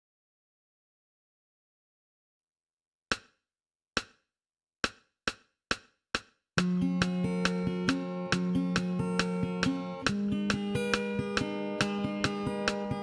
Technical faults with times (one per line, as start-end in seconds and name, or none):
0.00-13.02 wrong sample rate